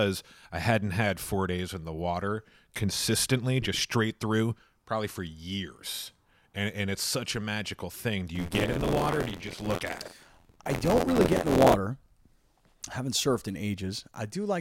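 From 8.35 to 11.74 s the speech picks up a rough, robotic rattle at about 86.1 Hz: buffer tearing. The writer and the reader of the playback ring buffer have drifted so they cross inside each period, fitting a 512-sample buffer. About a fifth of every buffer replays audio from roughly 50 ms earlier, joined with hard edges. The waveform shows regular step discontinuities. The spectrogram shows evenly spaced vertical striations and a comb of sidebands 86 Hz apart.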